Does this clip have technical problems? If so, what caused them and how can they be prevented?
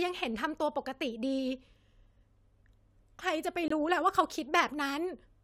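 Yes. A corrupt frame was muted from 3.68 to 3.72 s. Damaged compressed data was rejected, leaving an abrupt 40 ms silence, consistent with two lost frames. Error protection or retransmission on the transmission path would prevent it.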